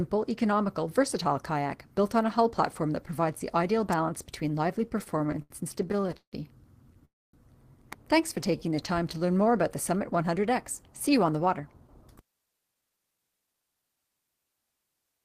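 At 3.92 s there's a sharp little snap sitting on top of the sound, and another, even tighter one at 7.93 s. Both sound like an electrical switching spike: a nearby switch, motor or static discharge likely threw a brief arc that the audio line picked up. They're very short, just a crisp tick rather than anything that disturbs what's underneath.

From 4.89 s to 6.35 s the audio starts to stutter with repeated stalls. There are about 18 little hitches where the receiver ran dry and stretched out the last bit of sound while it waited. Together they add up to roughly 0.41 s of filler, about 28% of that stretch, and the longest hold lasts 160 ms. Nothing actually drops out; it just drags and catches as it goes.

At 7.05 s there's a call audio freeze that lasts until 7.35 s. Packets were likely held up in transit and the jitter buffer emptied. The receiver carried the last sound forward briefly, then it faded, and about 250 ms of that pause is silence. 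When the data arrived the audio picked up where it left off. That inserts a gap of about 283 ms without losing anything, but it pushes everything after it later by that amount.

Right after that, from 8.36 s to 9.49 s, there's a jitter buffer slow-down. The receiver was building back a reserve by repeating tiny single-cycle slices of the waveform over and over. The pitch stays put, but the sound plays at about 89% speed and feels drawn out, stretched by around 137 ms over that stretch.

Then from 11.25 s to 13.97 s it swings the other way with a jitter buffer speed-up. Too much audio had piled up in the buffer, so the receiver kept snipping out short pitch-period-sized pieces to bring the delay down. Again the pitch holds, but things run at about 113% speed and come across as hurried, shedding somewhere around 0.4 s in total.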